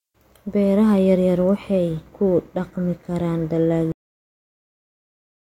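Speech that stops abruptly at 3.92 s, right after "waxay ku dhaqmi karaan", mid-sound with no decay, then digital silence to the end: a cut-off end, where the final buffers were never written.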